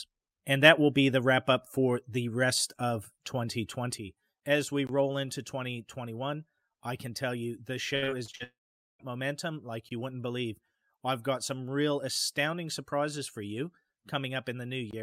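At 3.98 s a sudden gain jump drops the level by about 6 dB in a single step and holds there to the end. Sound and background noise fall together with no fade, which points to a setting or bit shift applied without a ramp.

A gap between chunks appears at 4.87 s, and again at 9.89 and 14.91 s, each a 20 ms hole with hard edges. The strict 5-second spacing marks them as chunk joins rather than network loss, and nothing is missing around them.

From 7.95 to 8.42 s, repeated packet loss (robotic sound) sets in. Five short holes, the longest 65 ms, are each patched by stretching the last sound, so about 39% of this span is concealed. The result is choppy, unlike the clean, regular chunk gaps.

Straight after, from 8.44 to 9.01 s, a long network dropout is the likely cause of a brief trailing buzz or hiss that gives way to about 0.46 s of silence. This is one sustained loss rather than a cluster of short holes, and the audio resumes without the lost part.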